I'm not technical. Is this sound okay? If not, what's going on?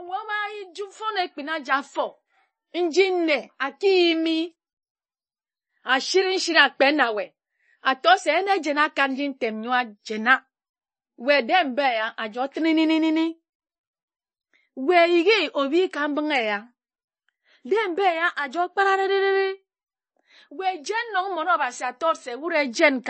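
No. Throughout the speech, the sound is dull and watery, with a swirly, metallic edge on s sounds and nothing above about 8.3 kHz. That likely comes from heavy MP3 compression, which cut the treble and dropped quieter detail to save space.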